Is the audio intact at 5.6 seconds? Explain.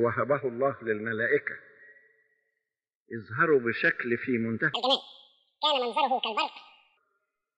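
No. From 4.74 to 6.97 s a section at the wrong speed plays at 2.0x, likely from a clock mismatch, so the sound turns hurried and roughly ten semitones higher.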